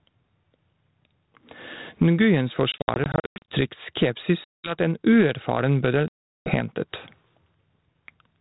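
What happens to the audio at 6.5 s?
Packets on the ADPCM call were dropped just after "at en uerfaren", from 6.08 to 6.53 s. This packet loss on an ADPCM call leaves about 380 ms of hard-edged silence, roughly twenty packets' worth. The decoder's adaptive predictor and step size lose track of the sender's, so the speech comes back near 6.5 s slightly distorted before settling.

Underneath this, gain pumping runs through the whole recording. The input gain is set too high and is likely being clamped by a fast limiter or compressor, so the level swings by around 15 dB. Loud and soft parts end up closer in level, leaving the speech squashed.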